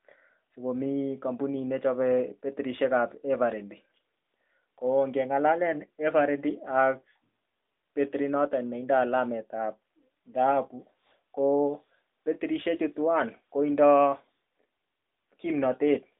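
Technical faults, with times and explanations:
No technical faults can be heard in the speech. It comes through an AMR narrowband mobile codec path, so the sound is held to a telephone band of roughly 250 Hz to 3.7 kHz.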